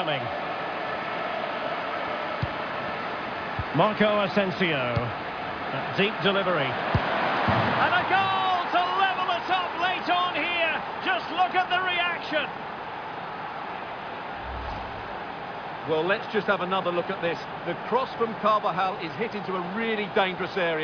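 Nothing in this one trips the ear at all, with no technical fault to point to anywhere along the way.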